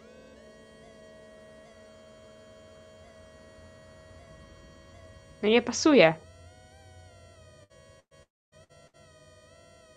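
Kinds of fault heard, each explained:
Burst of packet loss: short runs of lost packets near 7.63, 8.00, 8.64 and 8.87 s, each bridged by a fading continuation of the preceding sound before audio resumes further on.
Long network dropout: from 8.23 to 8.55 s, likely a network outage; the last sound is stretched and fades, leaving near silence for about 0.27 s before audio returns.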